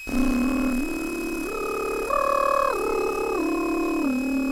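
From start to finish there's a switching supply whistle riding over the music, a thin high tone wandering between about 2.5 and 2.6 kHz, sitting roughly 15 dB under the music. It's a power supply slipping into audible burst-mode cycling or beating against another supply, its pitch drifting as the load shifts.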